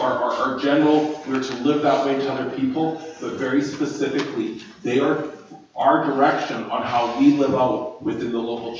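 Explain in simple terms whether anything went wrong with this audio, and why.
Nothing stood out on listening; the sound has simply passed through the normal microphone processing of a call, which trims the deepest bass and leaves nothing above 8 kHz, and that is expected rather than a fault.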